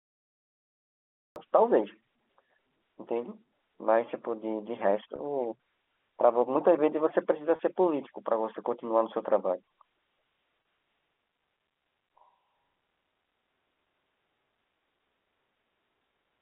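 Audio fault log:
0.00–1.36 s, cut-off start: the clip opens on digital silence and the sound begins abruptly at 1.36 s, already under way, with no attack or fade-in. Unlike a dropout, nothing came before it; the capture simply began late, mid-sound.
5.16, 7.56 and 10.62 s, packet loss with pitch repetition: three single lost packets of 30 ms each, bridged by repeating the last pitch period. Each heard as a brief held, buzzy tone rather than a gap of silence, which separates it from a plain dropout or a click.
11.15 s to end, switch to a distant microphone: the voice suddenly turns roomy and hollow, thinner in the bass, with room noise roughly 30 dB below the speech. The level barely changes, so this is a change in pickup distance, likely a far microphone taking over, not a gain drop.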